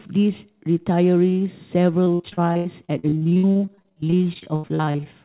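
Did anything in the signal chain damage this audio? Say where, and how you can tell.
Yes, at the network stage. From 2.04 s to 5.07 s the speech turns choppy and robotic, with 39 separate dropouts (the longest 78 ms) and about 36% of that span patched over. This is repeated packet loss: each missing packet is covered by extending the last bit of sound, which produces the robotic, choppy sound. On a spectrogram, already empty above 4 kHz from the G.711 call codec, the stretch shows smeared, repeated frames between abrupt breaks. The waveform shows cloned, looping segments.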